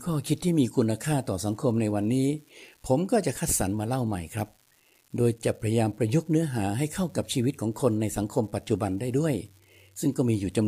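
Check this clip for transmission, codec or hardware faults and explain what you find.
A hardware fault runs through the whole clip. A steady crackling fizz sits under the speech from start to finish and carries on through the pauses. It is an unreliable data bit: one marginal data line flips its bit in a random share of samples, and each error adds a spike of the same size, about -39 dBFS.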